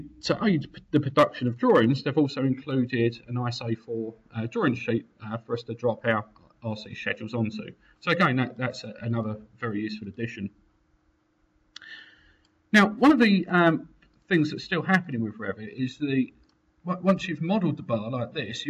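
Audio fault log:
No fault is logged for this audio.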